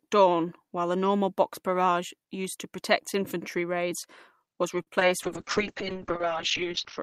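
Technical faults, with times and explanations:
4.82 to 4.88 s, short stall from a late packet. Just after "protect infantry raids was", one packet arrives late and the jitter buffer runs dry. The receiver holds the last sound for about 43 ms until the packet shows up, then carries on from the same point. Nothing is lost. The sound is simply stretched, with a faint buzz or dip, and everything after it plays about 43 ms later.
4.95 to 4.97 s and 5.00 to 5.02 s, short concealed packet loss. Two more gaps follow in quick succession. Each one is about 10 ms of audio that never reaches the decoder in time. The receiver papers over each hole by extending the preceding sound, then blends back into the real signal. The result is two tiny smears or wobbles.
5.24 s to the end, call bitrate drop. The link's bandwidth estimate falls, and the encoder is pushed from 48 kbps down to 8 kbps. It stays at the lowest rate for about 1.7 s. 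At that rate the codec quantises far more coarsely. It also narrows the audio band from 20 kHz to 6 kHz. The sound turns rough and watery, and everything above 6 kHz disappears, so it turns muffled.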